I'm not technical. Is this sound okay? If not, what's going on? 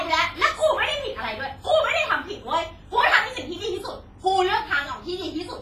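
No. The whole recording has a smeared, ringing quality, with a hiss that swells and fades along with the speech, and nothing above 15.5 kHz. That washy haze around each sound is likely WMA compression, which sounds different from steady background hiss.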